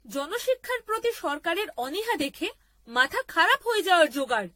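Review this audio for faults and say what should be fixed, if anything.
Generation loss runs through the whole clip. The speech sounds swirly and hollow, and consonant attacks are smeared rather than crisp. The likely cause is repeated lossy re-encoding, around seven passes. Each pass requantises on a shifted frame grid, so the damage piles up. The character fits a 64 kbit/s AAC-LC chain. A spectrogram shows nothing above 16.6 kHz, with blotchy smearing between bands. The waveform shows softened transients.

To prevent it, keep a lossless master and encode to a lossy format only once, at the final delivery step.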